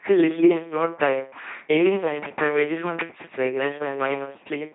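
From start to finish the speech passes through an LPC-10 vocoder, heavily damaged and empty above 3.7 kHz. Each moment drives a ten-pole tract filter with pure pulses or pure noise, so the voice becomes a flat mechanical buzz. Misjudged voicing flips it into sudden hiss. That robotic buzz separates it from ordinary low-bitrate smearing, and the rate fits 2.4 kbit/s.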